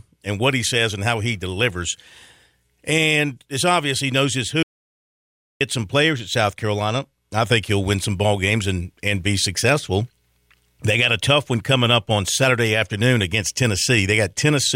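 A speech clip with one clear audio dropout to silence: right after "obvious he knows his" at 4.63 s, the sound cuts out completely until 5.61 s, picking up again at "some players at". That's nearly a full second, about 0.98 s, of dead digital silence with no room tone at all, and whatever was said in that gap is simply gone. It likely comes from the input briefly disconnecting or muting while the recorder kept writing zeros.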